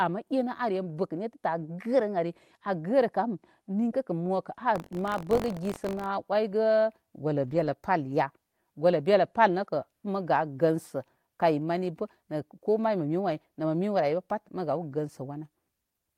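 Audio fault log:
4.74–6.07 s, buffer tearing: the writer and reader of the playback ring buffer have slipped, so a small slice of every period replays speech from about 40 ms earlier, hard-joined on both sides. This gives a rattly 46.9 Hz buzz under the speech, which fits a 1024-sample buffer.
7.43–7.69 s, 9.63–9.65 s and 13.27 s, lost packet rebuilt from error correction: lost packets were replaced by the low-bitrate copies carried in the following packets, 140 ms in the first case and 20 ms in the others. There is no gap, but the speech turns briefly rougher and noisier.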